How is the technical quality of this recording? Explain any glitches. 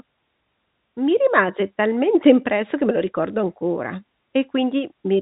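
Nothing stood out on listening; the speech comes through as ordinary G.711 telephone audio, with the band ending around 3.8 kHz, and no glitches could be heard.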